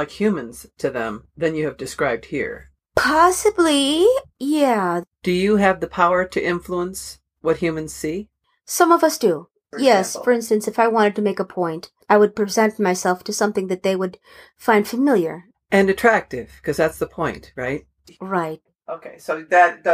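No technical faults are audible anywhere in the recording.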